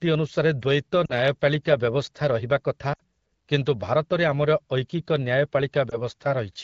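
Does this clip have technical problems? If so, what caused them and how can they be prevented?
Yes. The clip has lost AMR speech frames at 1.06–1.13 s, 2.93–3.00 s and 5.90–5.99 s, with concealed stretches of about 40 ms, 60 ms and 20 ms. These lengths suggest two, three and one 20 ms frames failing their checksum after radio errors. For each gap the AMR-WB decoder reused the last good pitch and vocal-tract parameters at decreasing gain, so the single lost frame gives a brief dip or warble, the longer runs drop to near silence within two frames, and the voice then returns weak or rough for a moment. The surrounding wideband coding stays clear, consistent with a 12.65 kbit/s mode. To prevent this, improve radio link quality or let link adaptation switch to a more robust codec mode with stronger channel coding when errors rise.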